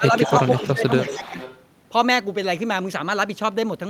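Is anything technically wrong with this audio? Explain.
Yes. From 0.0 to 0.14 s and again from 0.67 to 1.4 s there is speech suppressed in double talk, most likely an echo canceller mistaking the talker for loudspeaker echo while both sides spoke and turning the signal down. The speech dips and thins in pieces, by roughly 10 dB in the first stretch and up to about 15 dB in the second, for around half a second of the later span.

Echo leak appears from 0.15 to 0.73 s and again from 1.07 to 1.62 s. A copy of the speech returns 314 ms late at roughly 10 dB below the direct sound. This is consistent with a far-end loudspeaker whose canceller let part of its microphone pickup through and sent it back down the line.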